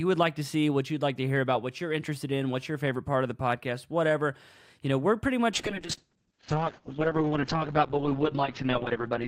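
Speech, with a call bitrate drop from 5.55 s to the end at 9.27 s. Starved of bits, the encoder turns the sound rough and muffled, consistent with a fall from 64 to 7 kbps. On a spectrogram, energy reaching 20 kHz stops abruptly at an 8 kHz ceiling.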